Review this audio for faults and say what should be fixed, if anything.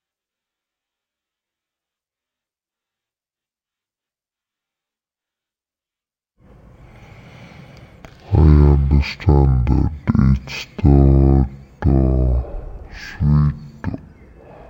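The speech runs at half speed and an octave low for the whole clip. That points to stereo read as mono. Interleaved left and right samples are played one after another as a single channel. The player reads the channel count from the file header, not an assumed value, to prevent this.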